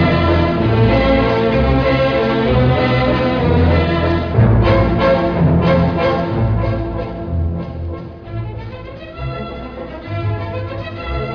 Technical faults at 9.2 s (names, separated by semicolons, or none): none